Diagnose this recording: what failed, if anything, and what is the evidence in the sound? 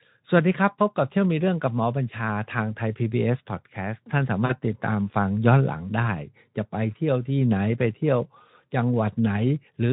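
At 4.45 s the speech briefly smears into a stretched sound that fades in level, and it stays weak or distorted until about 4.53 s, over the light Speex coding that runs through the clip. This is VoIP packet loss concealed by the speech codec, a network-stage failure. About 40 ms of audio went missing, which fits two 20 ms frames. The decoder extended its last pitch and filter with falling gain, and recovery lagged because each frame builds on the one before it.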